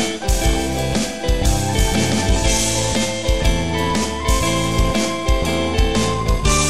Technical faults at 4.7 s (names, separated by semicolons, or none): none